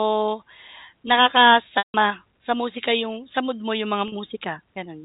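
At 1.78 s the speech drops out for 160 ms, until 1.94 s. This is packet loss with pitch repetition. The receiver loops the last pitch period to fill the hole, then fades it out. A buzzy held tone decays to silence before the speech cross-fades back. The gap fits about eight 20 ms packets. At 4.08 s a 40 ms loss follows. It heard as a brief, slightly held buzz. Both sit over narrowband G.711 telephone audio.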